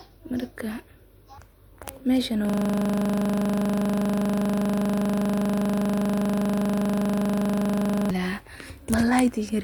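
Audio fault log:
2.50–8.11 s, system hang loop: the speech stops moving forward and a single 40 ms slice of audio repeats exactly, well over a hundred times, for about 5.6 seconds. This points to the host or driver freezing while the sound hardware kept replaying the same ring buffer, about 40 ms long. Because each repeat is so short, the repetitions fuse into a steady buzz at 25 Hz instead of a stutter.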